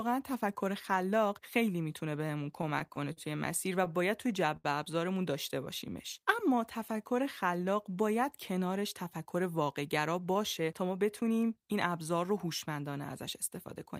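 From 1.89 to 3.18 s the speech breaks into repeated stalls, a stutter. Packets kept arriving late, so the jitter buffer ran dry eight times. Each time the receiver held the last sound until data came in, filling about 104 ms in all, none longer than 37 ms. Nothing is lost, but the speech catches and drags in short hiccups. Unlike a single late-packet stall, these holds come in a rapid cluster, about 8% of that stretch.

At 4.57 s comes one short stall from a late packet. A packet was due and missing, so the receiver stretched the last sound for 76 ms and then resumed from exactly where it stopped. That adds 76 ms to the delay from then on. It sounds like one syllable held slightly too long, with a faint buzzy or dipping quality. Because it is a single isolated hold, it does not have the choppy rhythm of the earlier stutter.

From 5.90 to 7.25 s a jitter buffer slow-down sets in. With the buffer running low or having just raised its target delay, the receiver built up a reserve by repeating single pitch periods and fragments of pauses many times over, adding 90 ms. 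The speech runs at about 94% speed, and its pitch stays the same, so sounds are drawn out. Because the added time is spread smoothly across the stretch, it lacks the abrupt catches of a stall.

From 9.17 to 11.31 s the opposite happens, a jitter buffer speed-up. The buffer held more audio than it was aiming for, so the receiver trimmed short pieces of one or a few pitch periods again and again, cutting around a fifth of a second. The speech runs at about 109% speed, still at its normal pitch, and sounds hurried. It can be distinguished from the slow-down by that rushed, compressed quality, where the slow-down sounds stretched.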